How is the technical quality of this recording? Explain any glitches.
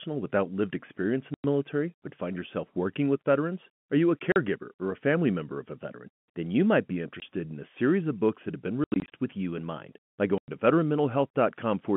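The recording has two kinds of glitch: repeated dropouts where packets went missing, and one passage where the playback speed jumped. All of it comes through a narrow telephone band.

Packet loss filled with silence: lost packets were replaced by dead silence. The gaps are consistent with 20 ms packets and have hard edges.
1.34–1.44 s: a 100 ms hole between "without lived experience in" and "military but find yourself".
4.32–4.36 s: a 40 ms gap after "you a", before "or a family member".
7.20–7.22 s: a 20 ms gap.
8.84–9.11 s: 160 ms lost in scattered gaps over about 280 ms, the longest run 80 ms.
10.38–10.48 s: another 100 ms hole.

Drift correction step: from 5.75 to 6.85 s, just after "family member of a", the audio suddenly runs 5.8% fast and sits about a semitone sharp (98 cents). The likely cause is clock-matching software abruptly changing its rate to rebalance its buffer.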